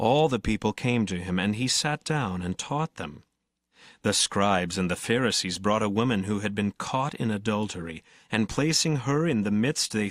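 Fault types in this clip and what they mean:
No faults can be heard.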